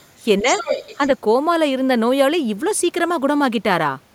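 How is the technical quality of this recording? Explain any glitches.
The technical quality is compromised by echo problems in the first second of this speech clip.

Other side's voice leaking through appears twice. From 0.00 to 0.12 s there is a very faint second voice, far below the talker. From 0.48 to 1.08 s it returns nearly as loud as the talker. The likely cause is a loudspeaker feeding the far end back into the microphone, with the echo canceller failing to remove it. What distinguishes this from background chatter is that the intruding voice is a second talker's speech rather than a steady ambient murmur.

Speech suppressed in double talk occurs from 0.41 to 0.51 s, a span of about a tenth of a second. The talker's level dips modestly, by a few decibels, overlapping the start of the louder leak. This is likely the echo canceller turning everything down because both sides were talking at once and it could not tell the talker from the echo. 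Unlike a network dropout, the sound dips but never falls fully silent.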